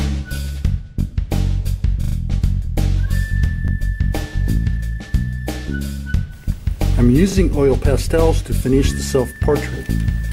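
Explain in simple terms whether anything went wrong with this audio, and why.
Yes, something went wrong: a repeated buffer, three times. The playback device ran short of fresh audio, so it replayed the last small chunk it had, about 40 ms long. At 2.04 to 2.16 s that chunk plays three extra times, giving a quick stutter. At 3.68 s and 9.36 s it repeats once, heard as a brief stutter. Each repeat joins abruptly, and nothing is skipped, so the sound just runs a little late.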